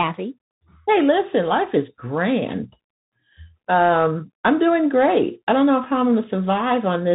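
Throughout, the speech carries the Bluetooth CVSD headset codec's damage, plainly audible. The one-bit delta modulator's adapting step cannot follow fast, loud high content, so sibilants turn scratchy over a granular hiss, with nothing above 4 kHz, which fits a 64 kbps CVSD link.

At 5.84 s, just after "great I don't know", a Bluetooth headset packet is repeated. One lost packet of about 3.8 ms was filled by decoding the previous packet's bits again, leaving a single brief tick rather than a sustained buzz.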